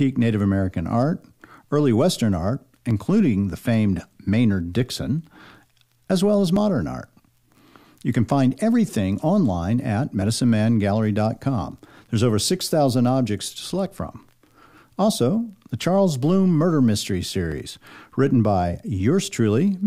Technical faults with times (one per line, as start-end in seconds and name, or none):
2.91-17.52 clock drift buffer slips